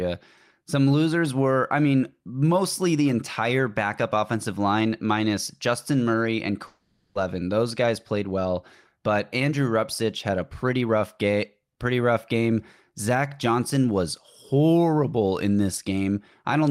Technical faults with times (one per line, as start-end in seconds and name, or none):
6.66-7.16 long network dropout
7.84-8.46 jitter buffer speed-up
9.08-10.97 jitter buffer speed-up